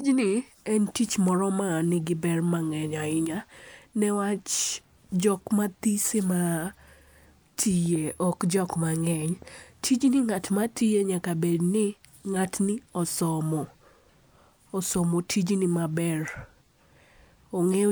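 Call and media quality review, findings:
Train of clicks, 7.86 to 9.43 s, speech clip: uneven ticking and popping over the talker, around seven clicks at about 4.5 per second, irregularly spaced, peaks roughly as loud as the speech itself. Similar pulse shape throughout. Likely cause: interference from nearby equipment or a faulty connection or power supply injecting repeated pulses into the path.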